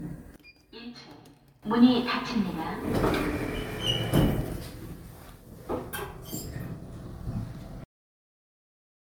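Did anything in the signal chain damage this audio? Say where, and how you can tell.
Yes. Generation loss runs through the whole clip, and its likely cause is repeated lossy coding at the codec or storage stage. The texture is swirly and smeared. Transients blur and the spectrum sounds hollow. That is worse than a single MP3 encode near 115 to 116 kbit/s would explain, which points to about five encode passes. Each pass requantises on a shifted frame grid, so the noise and spectral holes pile up.

From 0.36 s to 1.63 s, one channel sounds inverted. The likely cause is a polarity flip in the analogue wiring or in a channel-mapping step. Summed to mono, the level drops by about 19 dB. The centred, shared content cancels and only a faint remainder of the channel differences is left. Then the image returns to normal. The drop is confined to that window, so it is not a codec effect.

The clip has a cut-off end at 7.84 s, a playback or buffer-stage fault. 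The sound stops mid-event and falls straight to digital silence. There is no decay tail, and the silence runs to the end of the file. The final buffers were never written out, so the natural release is missing. A recording that ended normally would fade into room tone instead of stopping dead.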